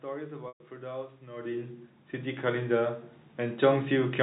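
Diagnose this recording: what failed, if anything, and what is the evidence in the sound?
Network stage: packet loss with pitch repetition. From 0.48 to 0.60 s, about 120 ms of audio is missing. The receiver repeats the last pitch period, so the sound holds with a buzzy tone and fades before speech returns. This fits six lost packets.

Call processing stage: automatic gain rising. From 2.12 to 3.06 s, the voice and the room noise swell together by about 4 dB. They rise together, so the gain control is raising its gain. It is not the talker moving, as near 1.5 s.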